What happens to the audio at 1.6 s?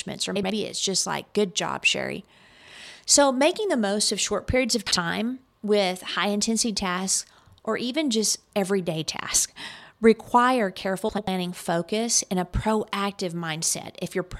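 Nothing goes wrong at 1.6 s; the speech there is intact, with no dropout, click, distortion or other fault.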